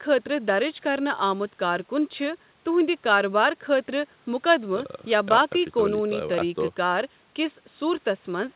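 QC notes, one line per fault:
No faults found; the speech sits within the 4 kHz bandwidth expected of the G.711 mu-law WebRTC call path, with the lowest bass trimmed by the call microphone processing's high-pass filter.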